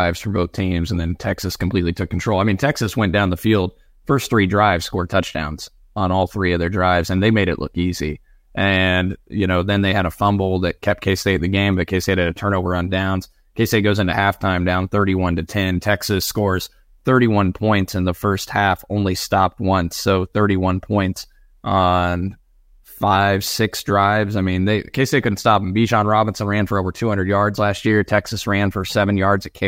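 A speech clip with a fine hiss and grainy roughness riding on the louder, brighter sounds from 9.4 to 11.5 s, just before "game but". The cause is sample clock jitter: timing errors of a microsecond or two leave noise about 40 dB below the signal.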